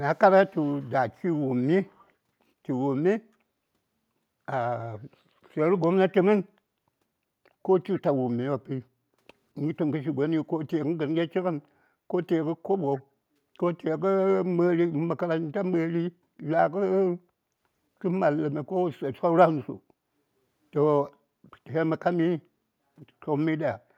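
A faint, delayed copy of the speech trails the talker by about 229 ms, first from 0.61 to 0.91 s, very quiet, then slightly louder from 1.86 to 2.08 s. This echo leak likely comes from a far-end loudspeaker whose echo canceller let residual pickup return.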